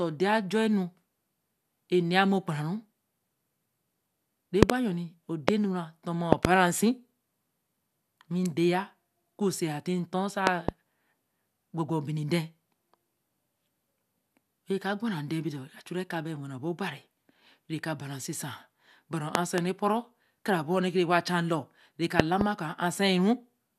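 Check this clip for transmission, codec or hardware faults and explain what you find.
The speech in this clip is interrupted by six loud pops. They fall at 4.63–4.72 s, 5.49–5.51 s, 6.33–6.47 s, 10.47–10.71 s, 19.35–19.60 s and 22.20–22.43 s. Each is a sharp thump. All but the one at 5.49 s are double, two hits in quick succession. They peak roughly 25 dB above the speech, which carries on underneath. The likely cause is a sudden voltage step or pulse entering the chain, from a plug, a switch, static or a driver glitch. Later stages shape that pulse into the thump.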